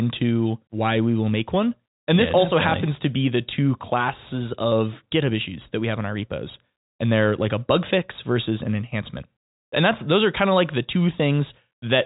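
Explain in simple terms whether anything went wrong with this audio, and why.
Nothing went wrong with this audio; the speech simply sounds like an ordinary telephone line, and nothing in it points to a problem.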